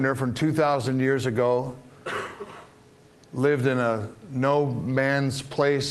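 Nothing stood out on listening; the audio carries only the ordinary band-limited character of a call path, with its top end stopping at about 12 kHz.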